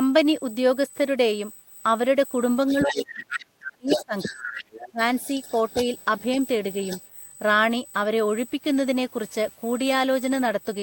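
A USB whine runs through the whole speech clip: a fixed tone at 8 kHz, strongest at its 16 kHz harmonic, sitting about 15 dB below the speech. It is likely current drawn in the bus's 125-microsecond microframes leaking into the audio through power or ground. On a spectrogram it shows as unbroken horizontal lines at 8 and 16 kHz.

From 2.69 to 3.44 s, the other side's voice leaking through appears as a second, fainter voice about 10 dB under the talker. This is likely loudspeaker playback that the echo canceller failed to remove from the microphone. On a spectrogram it shows as a faint second set of harmonics laid over the talker's.

Speech suppressed in double talk begins at 2.73 s and runs until 4.53 s. The talker's voice sinks in pieces, at its deepest by roughly 30 dB, across about one and a half seconds of that stretch. The likely cause is the canceller turning everything down because it could not separate the talker from the echo while both sounded together. 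The waveform envelope caves in, and the spectrogram thins and dims.

More leakage comes at 3.88 to 4.05 s and 4.21 to 4.89 s, again about 10 dB down. A second suppression from 4.71 to 5.00 s cuts the voice by roughly 25 dB for about 0.3 s.

Quieter leakage, about 20 dB below the speech, follows from 5.21 to 6.23 s and from 6.81 to 7.02 s. It is a shadow of foreign harmonics that barely marks the waveform.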